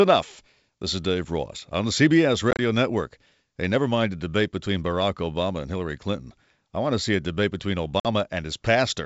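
At about 2.51 s to 2.60 s there's packet loss on an ADPCM call: roughly 60 ms goes missing in several short bites spread over 80 ms, the longest about 30 ms, each a hard-edged silent hole. The decoder's predictor and step size then disagree with the sender's, so the sound comes back briefly slightly distorted. It happens again right after "see a debate between", at 8.00 to 8.06 s, losing 50 ms, over the otherwise clean wideband G.722 coding.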